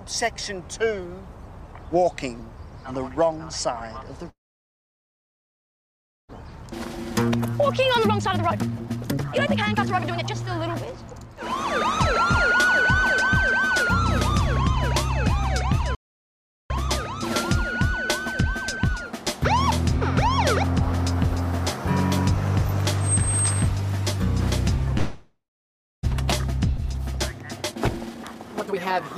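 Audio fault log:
4.29–6.31 s, call audio freeze: the sound trails off for a moment, then there's roughly 1.93 s of silence before it picks up exactly where it left off, so about 2 s of gap gets inserted and nothing is lost. The likely cause is delayed packets draining the jitter buffer, with the receiver stretching the last sound until data arrived.
6.45–11.32 s, jitter buffer speed-up: right after that freeze the playback runs at about 139% speed with unchanged pitch. It sounds clearly rushed. The receiver is trimming many short pitch-period slices to claw back roughly 2 s of surplus buffered delay.
12.55–13.72 s, jitter buffer speed-up: a gentler trim at about 103% speed, shedding around 40 ms. That's below the point where things start to feel hurried, so it's easy to miss.
15.95–16.70 s, playback stall: the sound cuts out mid-flow for about 750 ms of silence, then carries on. Likely the player ran out of data or its thread got blocked until it recovered.
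17.90–18.89 s, jitter buffer speed-up: another mild pass at about 103% speed, dropping roughly 40 ms, again subtle.
24.98–26.05 s, call audio freeze: same pattern as the first one, just shorter. There's a brief tail of the last sound followed by about 610 ms of silence. Then playback resumes from the same spot, adding about 1.05 s of delay with nothing missing. Held-up packets are the probable reason.
26.77–26.80 s, skip ahead: playback jumps forward with only about 5 ms of fill, and roughly 300 ms of audio is gone. The two sides are butted almost straight together. That stretch was dropped either in transit or by the jitter buffer overflowing while later audio was already queued.
27.39–29.18 s, jitter buffer speed-up: the clip finishes at about 125% speed, same pitch, noticeably hurried. The receiver is still cutting pitch-period pieces to pull the buffer back down to its target.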